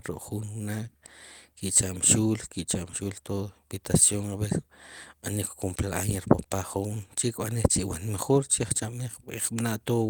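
No technical faults can be heard anywhere in the recording. Nothing breaks up, drops out or changes character at any point in the speech.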